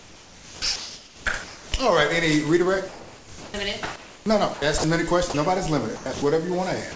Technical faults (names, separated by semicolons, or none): sound chopped by the voice detector; comfort noise in place of the background; sound dropped by the voice detector